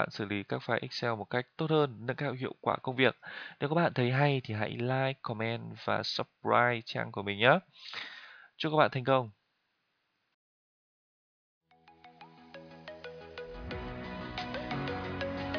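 No technical fault can be heard anywhere in this audio. There is nothing here that calls for a time or a cause to be given.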